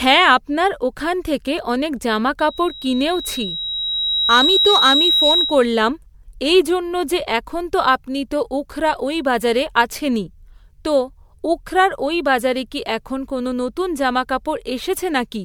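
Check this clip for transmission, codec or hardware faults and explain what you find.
Two faults here: a stretch of loudspeaker feedback squeal early on, and generation loss running through the whole recording.

From 2.39 s to 5.77 s, just after "আপনার ওখান থেকে অনেক", a loudspeaker feedback squeal takes over. The microphone was picking up the speaker it was driving, and at 3.8 kHz the loop gain went above one, so that tone kept feeding itself. You can hear a single whistle swell over about two seconds until it sits roughly 5 dB above the speech, and then it drops away when the loop breaks.

Throughout, the speech sounds swirly, smeared and a bit hollow, with blunted consonant attacks. That's more damage than one encode at this quality would leave. It points to generation loss, likely from the audio being decoded and re-encoded as MP3 a few times, which fits a 96 kbit/s chain. Each pass quantises again on a shifted frame grid, so the noise and the spectral holes pile up from one pass to the next.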